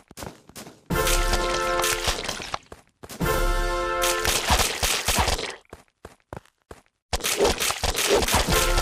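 From 8.27 to 8.47 s, bubbling, squelchy chirps break over the sound: DAB burbling, where weak-reception bit errors corrupted MP2 sub-band levels across what seems about nine frames.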